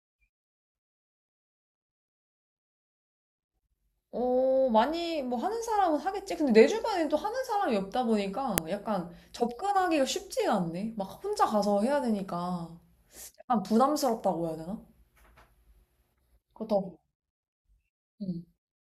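At 8.58 s there is a single sharp, loud click. It is a file header played as audio. A second WAV piece appears to have been joined on without its header being stripped. Those few dozen bytes of file information were read as sound samples. They bear no relation to the speech around them. The result is a brief, hard snap at the join point.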